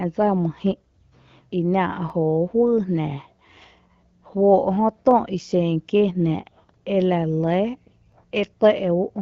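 Overlapping chunks cause a brief stutter at 2.10 s, 5.11 s and 8.12 s, spaced 3 s apart. The speech was handled in 3-second blocks, and each new block began slightly before the previous one finished, so about 12 ms of audio plays twice at every join. That doubled sliver sounds like a small click or hiccup in the speech, returning at a steady interval. The light band-limited texture of HD Voice coding remains audible beneath these joins.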